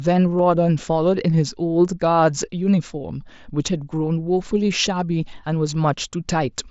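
At 0.39 s there is a single concealed Bluetooth headset packet loss: about 7.5 ms of speech went missing and was patched by repeating matching recent waveform, nearly inaudible.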